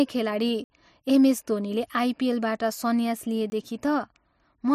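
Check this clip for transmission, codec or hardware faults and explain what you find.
The speech has two blocks of digital silence, at 0.64 to 0.70 s just before "एमएस धोनीले आइपिएलबाट" and at 3.50 to 3.52 s. Samples were dropped, likely because the output buffer went unfilled, so the 60 ms gap sounds like a short hole and the 20 ms gap like a very brief hole. The waveform shows flat lines, and the spectrogram shows blank columns.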